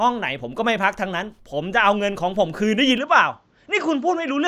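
At 2.98 s the speech turns duller and stays that way to the end. Nothing is heard above 7.7 kHz, and a faint new noise floor appears, well below the speech. There is no gap and the level holds. The input was likely switched to a poorer device.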